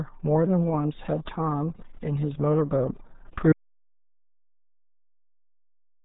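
From the start the speech sounds muffled and gargly, with a watery, smeared quality and no content above roughly 3.8 kHz. This is the RealAudio 14.4 codec at work. Its heavy damage points to the 8 kbit/s RealAudio 1 format built for dial-up modems.

At 3.53 s the sound cuts off abruptly and stays in silence, with no room tone, for the last 2.5 seconds. This is an audio dropout to silence, likely caused by a lost input while the recorder kept writing silence.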